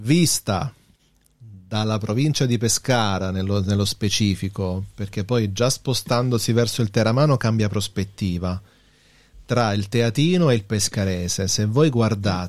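Around 9.57 to 9.62 s there's a short burst of hard clipping. For about 40 ms the speech peaks ran roughly 1 dB past what some stage in the chain could pass, so the tops of the waveform got sliced flat. Those squared-off peaks throw extra harmonics high up the spectrum, and you hear it as a brief crackle riding on that loud moment rather than a sustained fuzz, since the overload is so small.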